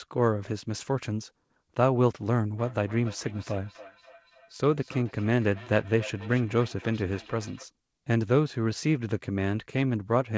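Speech that picks up a feedback echo between two devices from 2.59 to 7.68 s. Each phrase comes back roughly every third of a second, thinner and ringier each pass, peaking about 20 dB under the talker. That's two devices in the same room on one call, each mic hearing the other's speaker, and neither echo canceller touching sound it didn't play itself. The call's G.722 path tops out at 8 kHz.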